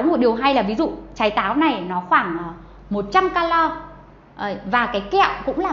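Nothing in the audio stood out as a technical problem on listening.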